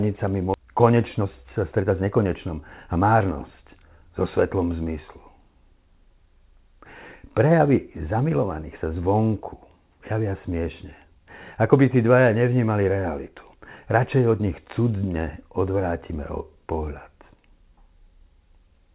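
Speech, carried over a call path whose band stops at 4 kHz, consistent with G.711 A-law at 64 kbps. At 0.54 to 0.56 s a skip ahead drops about a second of audio and butts the two sides together with no filled gap. That distinguishes it from a dropout, which would leave silence or concealment noise. From 0.58 to 3.91 s, just before "so svetlom zmyslu", a jitter buffer speed-up runs the speech at 112% with unchanged pitch. Many pitch-period cuts trim about 0.4 s in total, so the speech sounds hurried but not chipmunk-like, unlike a resampling error, which would also shift pitch.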